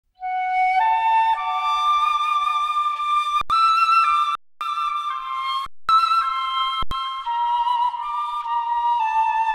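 At 3.41 s, 4.35 s, 5.66 s and 6.83 s the output shows an underrun with held sample. The buffer ran dry and the converter held its last value, so the waveform flattens and the sound stops dead for 85 ms, 256 ms, 225 ms and 85 ms. The two 85 ms gaps fit a 4096-sample buffer. Each time, playback resumes further on, skipping roughly 100, 300, 200 and 100 ms of audio.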